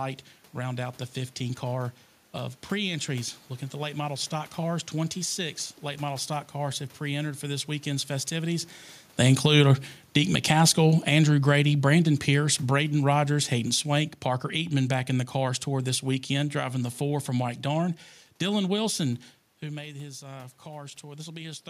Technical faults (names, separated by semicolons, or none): automatic gain falling; automatic gain rising